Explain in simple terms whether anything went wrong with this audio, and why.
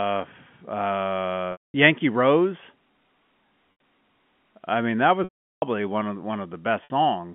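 Chunks of the audio were lost in transit four times, a fault called packet loss with pitch repetition. To fill each gap, the receiver repeated the last bit of sound and faded it. The short gaps at 3.72 to 3.80 s and 6.84 to 6.90 s sound like a brief buzzy hold. The longer ones, 1.52 to 1.74 s and 5.24 to 5.62 s (between "I mean that" and "one of"), fade to silence before the speech returns, all over a telephone-quality G.711 line.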